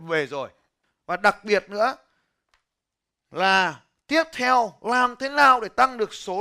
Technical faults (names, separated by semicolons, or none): none